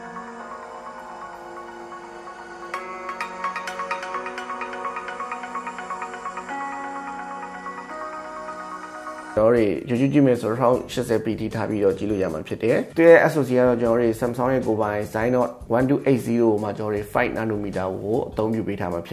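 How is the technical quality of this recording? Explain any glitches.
No technical faults or glitches are audible anywhere in the recording.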